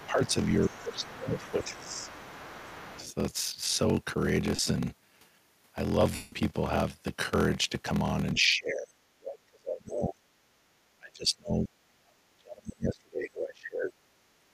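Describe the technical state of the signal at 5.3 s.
At 5.3 s the speech carries a block size mismatch (padded), present across the whole clip rather than at that moment alone. Each block reaching the reader is short and topped up with zeros, so a brief silence recurs about 43.1 times per second, which fits 1024-sample reads at 44.1 kHz. The result is a steady buzz and delivery slowed to 0.861 of normal speed. A resampling error would shift pitch too, and random dropouts would not be periodic.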